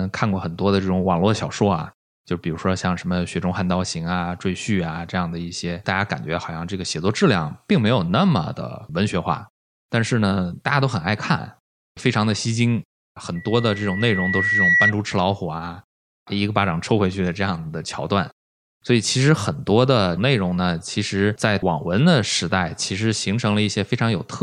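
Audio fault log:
13.35–14.93 s loudspeaker feedback squeal: a 2 kHz tone swells over roughly a second and a half to about 5 dB above the speech, as mic–speaker loop gain exceeds unity there.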